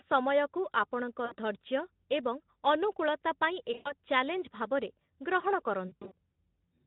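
Packets dropped three times in this Speex-coded speech, and the decoder covered each gap with VoIP packet loss concealment, stretching its last pitch and filter state while lowering the gain. At 1.25–1.35 s, after "ସମୟକୁ ଆପଣଙ୍କ", about 60 ms goes missing. At 3.74–3.92 s, after "ଏବଂ ଅନୁକୂଳତା ପାଇଁ", the loss reaches 120 ms. At 5.87–6.12 s, 140 ms of losses are scattered in runs of up to 40 ms. Each gap becomes a stretched, fading smear, and the speech stays weakened briefly afterward.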